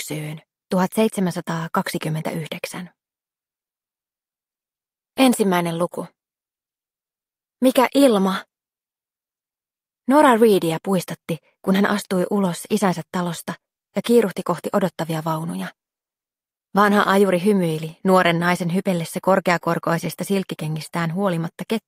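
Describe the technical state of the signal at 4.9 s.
At 4.9 s the signal is intact, with no audible fault at that moment.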